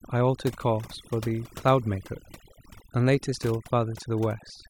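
From start to finish, overdone noise removal strips frequency bands judged close to the noise, taking quiet speech detail too, leaving twinkling specks in near-silent gaps.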